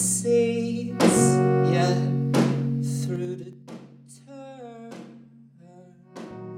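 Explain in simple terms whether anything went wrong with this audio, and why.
Around 3.07 to 3.62 s there's zipper noise: the volume drops quite a lot, but in coarse jumps, roughly ten a second, instead of a smooth slide. Each jump leaves a tiny click, so you hear a ticking, zippery texture riding on the sound while it fades.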